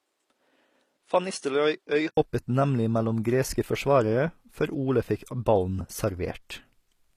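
From the start to 2.17 s, the speech sounds duller and a little quieter, by roughly 5 dB. Nothing reaches above 10.5 kHz, and a faint new background noise sits far below. This is likely an input switched to a poorer device. An 80 ms silence marks the change back at 2.17 s.

Across the whole clip, the treble stops at 15 kHz and sounds synthetic. S sounds turn gritty and metallic. This points to HE-AAC compression, which rebuilds the upper band from copied lower bands. The plainly audible damage fits a stream of about 24 kbps.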